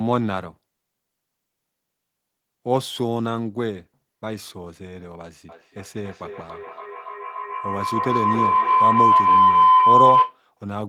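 A speech recording carries a feedback howl from 5.49 s to 10.42 s. The tone climbs until it peaks about 9 dB above the speech, because a microphone and loudspeaker on the same call in one room pass sound round a loop that adds level each trip. The loop's favoured band wins out near 1 kHz, pulsing roughly every 0.3 s at the loop delay. A spectrogram shows a thickening horizontal line around 1 kHz; the waveform envelope swells steadily.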